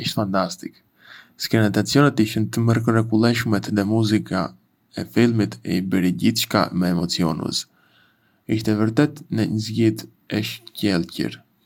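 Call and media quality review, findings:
No findings in this call and media quality review; nothing in the speech audio warrants a ticket.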